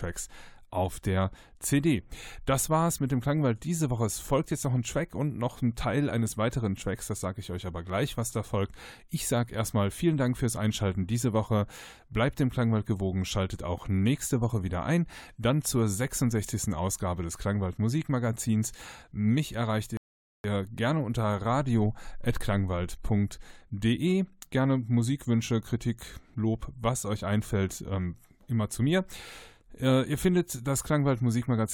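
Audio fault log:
19.97–20.44 s rebuffering stall: the speech cuts abruptly to silence, then resumes at exactly the point where it broke off, with nothing skipped. The player used up its downloaded audio and waited for more data to arrive, adding 470 ms to the clip.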